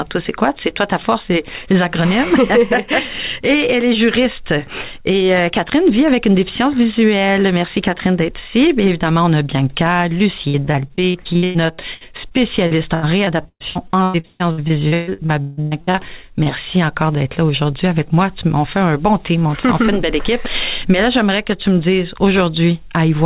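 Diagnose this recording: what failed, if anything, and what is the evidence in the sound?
Network packet loss, repeated: from 10.48 to 15.99 s the sound turns choppy and robotic, with about a third of that stretch rebuilt by concealment and holes up to 158 ms long. Unlike a dropout from a failing buffer, each hole is filled by stretching the previous sound rather than by silence.

Short concealed packet loss at 16.43 s: a single loss of about 20 ms on the network side, patched with roughly 25 ms of extended audio. It is a brief smear or wobble heard over the call path's 4 kHz-limited band. Because it is one isolated event rather than a run of them, it does not build into the robotic texture heard just before it.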